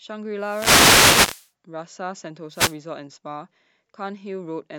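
From 0.39 to 1.51 s, and again from 2.51 to 2.77 s, there's a wireless microphone noise hit. The FM radio link fades as reflections cancel, so receiver hiss surges up over the speech, heard as a swish of static, longer in the first case.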